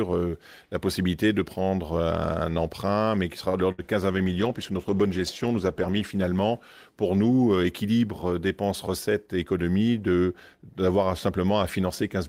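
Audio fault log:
3.49–3.57 s, short stall from a late packet: a packet arrived late and the jitter buffer ran dry, so the receiver held the last sound for 43 ms until the packet turned up. Playback then picked up exactly where it had stopped, so nothing is lost. The sound just hangs on too long, with a faint buzzy or dipped quality. The end-to-end delay is 43 ms longer from this point on.
3.72–3.84 s, burst of packet loss: a run of audio about 60 ms long was lost or came too late to play. The receiver covered the gap with about 65 ms of concealment, extending the last sound and fading it, which turns it into a held buzz or a dying hiss. The audio then jumps ahead, so the material from that gap is gone for good rather than delayed.
4.15–6.85 s, call bitrate drop: the bandwidth estimate fell, and the encoder was pushed from 32 kbps down to 16 kbps, holding the lowest rate for about 1.9 s. 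With half the bits available, each frame is coded more coarsely, so the sound takes on a rougher, watery texture instead of its earlier clarity. The quality returns once the rate climbs back at the end of this span.
9.14–9.46 s, jitter buffer speed-up: the buffer had built up more audio than its target, so the receiver trimmed it back by cutting out many short pieces, each one or a few pitch periods long, removing about 50 ms in total. Playback runs at about 115% speed while the pitch stays the same. The passage sounds briefly hurried, and any steady rhythm through it loses its even spacing.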